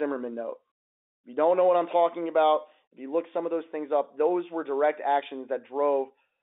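No faults turn up anywhere in the speech, which just sits in the usual narrow G.711 telephone band from 250 Hz up to 3.6 kHz, the way a phone line carries it.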